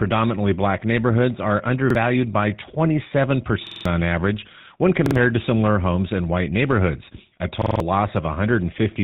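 Throughout, the speech carries GSM full-rate codec damage: a pulse-excited vocal-tract model at 13 kbps strips everything above 4 kHz, leaving a plainly buzzy, gravelly texture. Repeated buffers cause hard-joined stutters where a roughly 46 ms block, which fits a 2048-sample buffer, replays when new audio arrives late. This happens at 1.90 s after "black neighborhoods are", at 3.67 to 3.85 s before "on average when", at 5.06 to 5.16 s before "to similar homes in", and at 7.62 to 7.80 s.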